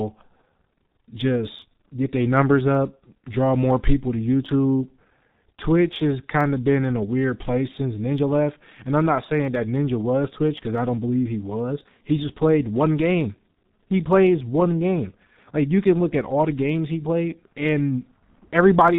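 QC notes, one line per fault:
Throughout: G.723.1 codec. Nothing passes above 3.8 kHz, and coarse 30 ms frames muffle and roughen the speech and smear consonants, which fits a 6.3 kbit/s setting.
0.12–18.98 s: clock slip clicks. A soft rattle of single-sample ticks roughly every 30 ms, likely from unsynchronised clocks drifting about 700 ppm apart.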